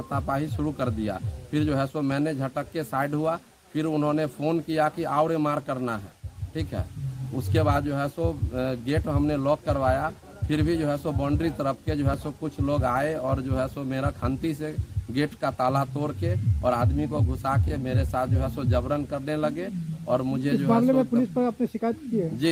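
No technical faults are audible.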